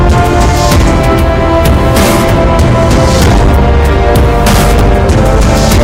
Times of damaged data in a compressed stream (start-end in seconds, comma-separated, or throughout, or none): none